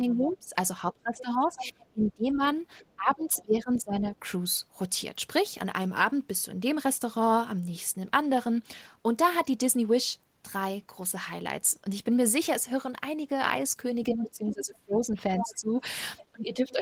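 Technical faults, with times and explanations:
0.0–4.16 s and 14.1–16.8 s, speech suppressed in double talk: with both ends talking at once, the echo canceller likely could not tell the near talker apart from loudspeaker echo and turned both down. The speech dips by up to about 20 dB, for roughly 3 s in the first stretch.
0.3–3.82 s and 14.21–16.8 s, other side's voice leaking through: the echo canceller likely left part of the far end's loudspeaker playback in the microphone signal. A second voice sits underneath the speech in both overlaps, at about 10 dB below it.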